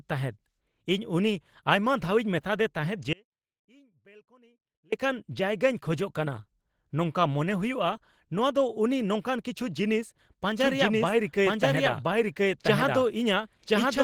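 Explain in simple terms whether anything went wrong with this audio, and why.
The speech sounds rough, grainy and a little hoarse all the way through. That is Opus compression, likely squeezed so hard that the encoder switched to its speech-style mode.

From 3.13 to 4.92 s the speech suddenly vanishes, leaving only a faint trace, then returns just before "ᱡᱟᱭᱜᱟᱧ ᱠᱷᱚᱡᱚᱜ". This audio dropout to a faint residue likely means the signal was lost while the line stayed open.

From 10.59 s, right after "ᱱᱚᱝᱠᱟᱱ ᱠᱤᱪᱷᱩ ᱡᱤᱱᱤᱥ", an equally loud second copy runs about one second behind until the end. This doubled audio track means the same recording was mixed in twice.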